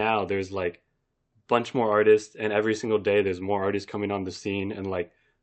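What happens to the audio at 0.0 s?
Nothing goes wrong at 0.0 s; the speech starts cleanly there, with no dropout, click or distortion at that moment.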